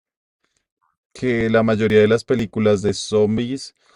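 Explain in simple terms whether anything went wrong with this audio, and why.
Small skips recur every half second, at 0.91, 1.41, 1.90, 2.39, 2.89 and 3.38 s. Each removes a tiny sliver of the speech, and the surrounding sound is butted together with no gap of silence. This is audio missing between chunks, likely from a recorder handling sound in half-second blocks and losing a bit at each handover. The steady, clockwork spacing and the absence of any silent hole set it apart from random dropouts.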